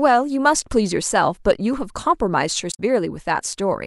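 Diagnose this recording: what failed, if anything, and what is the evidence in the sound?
A short glitch cuts across the speech from 2.71 to 2.80 s, roughly a tenth of a second. This is damaged data in a compressed stream at the codec stage: corrupted bytes made the decoder misread those frames, lose sync and hunt for the next valid frame header.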